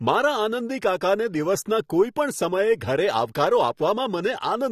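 Likely AAC compression runs throughout this speech: the audio is dull and smeared, with nothing above 14.4 kHz and fizzy sibilants, which fits a low bitrate around 32 kbps.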